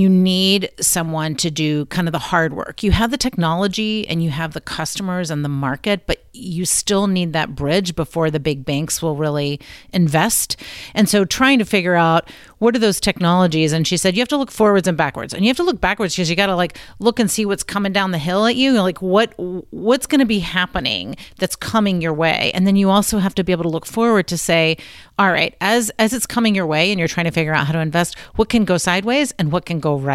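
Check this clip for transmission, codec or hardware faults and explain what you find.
No faults detected in this clip.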